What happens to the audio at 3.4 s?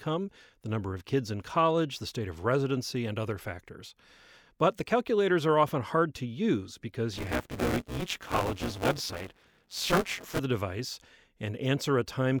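Nothing goes wrong at 3.4 s; the speech there plays through intact, with no dropout, click, distortion or other fault.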